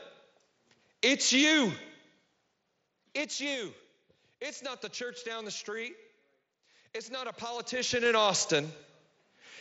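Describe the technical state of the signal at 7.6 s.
At 7.6 s the clip is inside a stretch of zipper noise running from 7.52 to 8.17 s. The level is being changed in coarse 3 dB steps with no smoothing between them. Each jump leaves a small click. They come about seven times a second, and the level moves by roughly 15 dB over the span. The result is a ticking, zipping texture riding on the speech. The band stops near 7.7 kHz, which fits the mSBC headset link.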